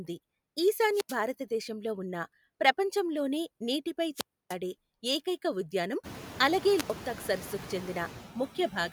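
Noise suppressor artifacts run through the whole recording. The processor cuts the bands it judges to be steady noise by about 13 dB, frame by frame, so the background dips in the gaps between words and swells back under them. Unlike a simple gate, which switches everything on and off together, this pumping is spectral, so the texture of the noise changes as well as its level. It grows more noticeable after the room noise rises by about 22 dB around 6 s, sitting about 15 dB below the speech.

Wireless microphone squelch dropouts occur at 0.89–1.19 s, 4.13–4.56 s and 6.75–6.94 s. Each time, the analogue FM link fades, hiss swells briefly, and the receiver's squelch then mutes the output, for about 83 ms, 296 ms and 87 ms respectively, before the signal returns. The rising static before each silent hole is what separates these from digital packet loss, which cuts out abruptly with no hiss leading into it.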